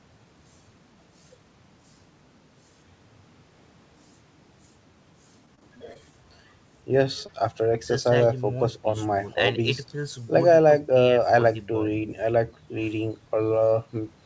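From 5.46 to 5.97 s, repeated packet loss (robotic sound): five short gaps, none over 21 ms, are patched by repeating prior audio, giving choppy speech with pieces missing and smeared, repetitive striations on a spectrogram.

At 7.26 to 7.30 s, a short concealed packet loss leaves a brief smear where about 20 ms went missing, visible as a slightly flattened, blurred patch in the waveform.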